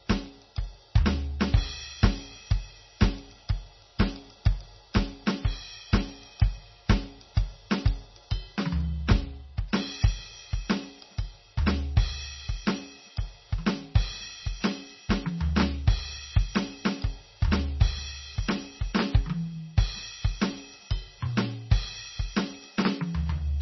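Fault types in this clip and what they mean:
MP3 compression: The music has been squeezed hard through a lossy encoder, and the damage runs through the whole clip. Nothing survives above about 5.9 kHz, so the treble is sliced off flat, and the weak detail that remains flickers in and out, giving a watery, swirling texture with smeared attacks. The heavy artefacts point to a bitrate around 24 kbps, likely MP3. That flickering swirl is what separates it from a plain low-pass filter, which dulls the top but leaves the rest steady.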